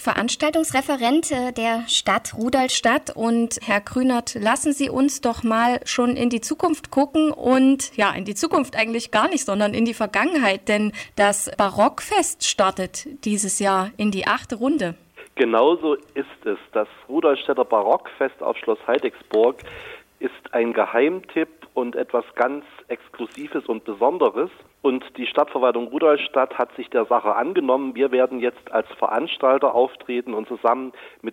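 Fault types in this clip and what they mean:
wrong sample rate: 0.43–2.74 s plays 1.09 times fast, 1.47 semitones high, fitting 44.1 kHz audio at 48 kHz; spectrogram bands shift up, waveform compresses.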